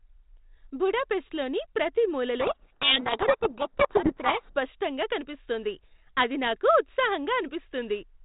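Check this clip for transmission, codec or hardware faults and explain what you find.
There's one real fault here, over a 4 kHz-limited G.726 telephone line that fits 32 kbit/s coding. From 2.4 to 4.55 s there's a codec payload misread: the G.726 code words arrive with their bit order swapped, so the decoder buries the speech in harsh distortion.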